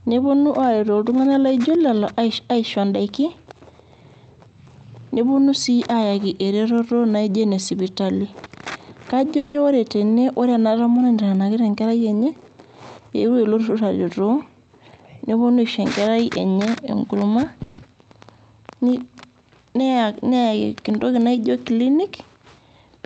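At 9.37 s there's a call audio freeze lasting until 9.56 s, just before "ore tene ore". For about 170 ms the last bit of speech gets stretched into a short buzzy, hissy tail that fades. The likely cause is delayed packets draining the jitter buffer, so the receiver improvised. When the audio resumes, it picks up where it left off. Nothing is lost, but everything after that point lands 170 ms later.

From 13.20 s to 14.50 s there's a jitter buffer speed-up. The buffer was holding more than its target, so it trimmed tiny pitch-period slices over and over, removing around a fifth of a second in total. The speech runs about 113% fast there at the same pitch and sounds noticeably hurried.

A second call audio freeze runs from 17.63 s to 17.80 s. It's the same buzzy fill, this time about 150 ms, again with nothing missing afterward, just another 150 ms of added delay. Across the whole clip, the Opus call path keeps the top end cut off at about 8 kHz.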